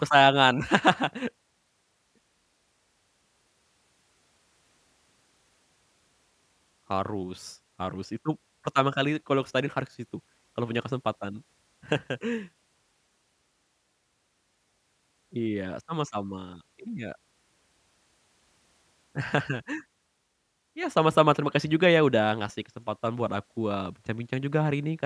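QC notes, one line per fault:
Nothing stood out on listening to this speech recording.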